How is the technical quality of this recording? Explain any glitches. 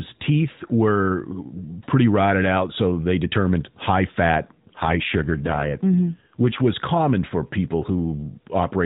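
The recording is narrowband mobile-codec speech, with one glitch. AMR rate drop, 4.44 to 6.68 s, after "so they determined high" until "common for people": a weakening link forces fewer speech bits, roughening the voice, which fits 12.2 falling to 5.9 kbps.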